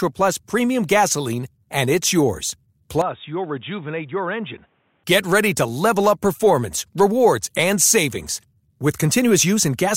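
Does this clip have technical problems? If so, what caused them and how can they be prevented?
Yes. Input switched to a poorer device, from 3.02 to 5.04 s: the speech abruptly turns dull with nothing above 3.8 kHz, drops about 10 dB, and gains a faint new noise floor, likely from a fallback microphone or headset call profile. Locking the recording input to one device prevents it.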